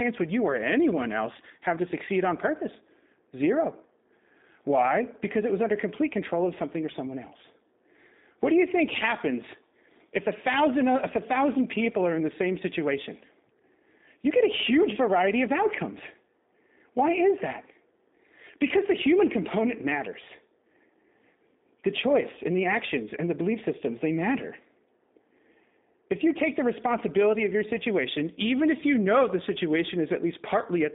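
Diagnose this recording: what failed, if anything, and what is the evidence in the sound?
G.729 codec damage, present throughout the speech: a codec-stage fault. The audio sits in a narrow 200 Hz to 3.7 kHz telephone band, with nothing above 3.8 kHz, and it sounds plainly rough and synthetic, which fits an 8 kbit/s model-based encoder rebuilding each frame from a vocal tract filter, a pitch predictor and a few pulses.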